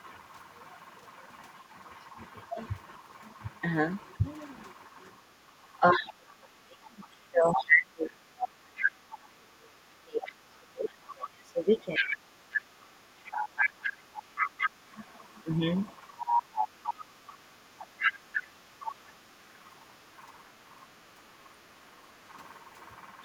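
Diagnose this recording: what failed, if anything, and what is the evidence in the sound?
Speech suppressed in double talk, at 2.17–2.57 s, 4.18–4.25 s and 5.8–15.6 s. The talker dips, up to about 35 dB. This is likely call-processing echo suppression clamping both talkers.

The other side's voice is leaking through from 4.04 to 18.91 s, about 5 dB below the talker. This likely comes from residual loudspeaker echo the canceller failed to remove.

Background gated by the echo canceller, at 5.37–5.52 s and 12.66–12.9 s. Room sound drops about 8–9 dB, then returns as the suppressor releases.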